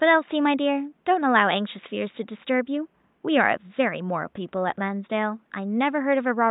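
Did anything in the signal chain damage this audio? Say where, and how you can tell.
No, nothing in the chain has damaged this speech; the only thing under it is the room's own background noise, sitting about 44 dB below the voice, which was captured at the microphone and is not the system's doing.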